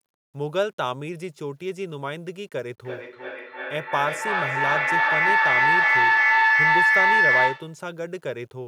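From the start, the speech carries a fine grit that tracks its level. This points to low bit depth without dither, likely about 10 bits, rounded. From 2.81 to 7.85 s, a feedback howl builds near 2 kHz. It pulses about every 0.3 s and peaks about 8 dB above the speech. Two devices share the call, and the loop gains level on each pass.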